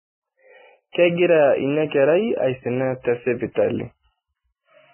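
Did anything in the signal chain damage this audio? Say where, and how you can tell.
Yes, the damage is at the codec stage. Across the whole speech clip, nothing comes through above about 3.1 kHz, and the treble that survives is hissy and grainy rather than detailed. That pattern points to heavy Vorbis compression, likely at a very low bitrate somewhere around 9 kbps. At that setting the encoder drops the cut-off hard and quantises what's left so coarsely that fine detail gets swapped for noise of similar energy.

There's also a pre-echo from 3.52 to 3.56 s, a smear of hiss about 45 ms long sitting right before an attack, which makes that onset sound soft. It's the same transform codec at work. The quantisation noise gets spread across the whole block, so when a sharp attack lands late in that block, noise sized for the loud part leaks into the quiet moment just before it.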